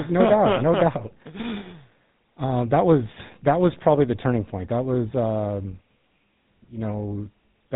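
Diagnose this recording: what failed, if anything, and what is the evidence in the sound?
The codec stage failed: GSM full-rate coding throughout. Nothing passes above 3.9 kHz. Plainly audible buzzy roughness comes from pulse-driven excitation, consistent with a 13 kbps stream.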